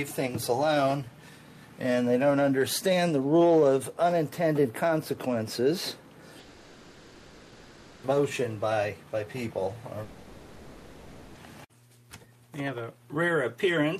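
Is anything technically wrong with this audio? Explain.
Yes. From 6.39 to 8.06 s and again from 10.03 to 11.38 s, the audio gives way to a fading buzz. It fills each gap, about 1.6 s and 1.3 s. This is likely a long network dropout. The receiver stretched the last sound, and the missing stretch never returns.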